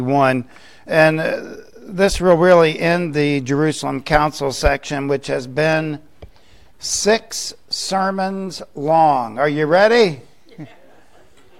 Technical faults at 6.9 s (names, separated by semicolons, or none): none